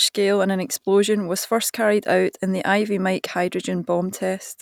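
Listening through this short piece of speech, nothing stood out as a technical problem.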